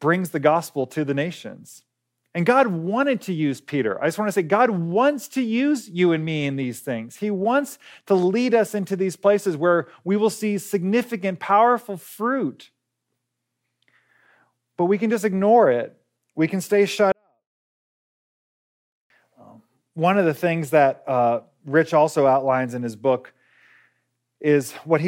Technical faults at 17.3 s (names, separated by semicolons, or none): 24-bit alignment error (too quiet)